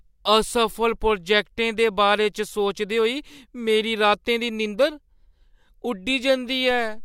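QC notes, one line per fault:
6.71 s to the end, DC step: the zero line of the waveform jumps by about -32 dBFS and holds there to the end of the clip, as when an input carrying an offset is switched in. The sudden shift is heard as a low thump while the speech carries on unchanged.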